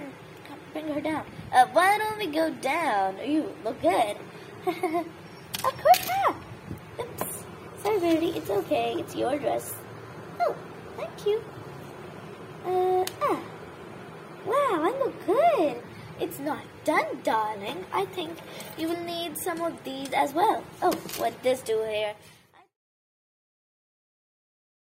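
Nothing here is technically wrong, and the only change in level is a gentle editor's fade-out that begins around 21.5 s and is done by 22.8 s, with no click or hard edge where it ends.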